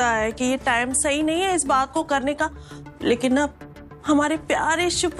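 No faults are audible anywhere in the recording.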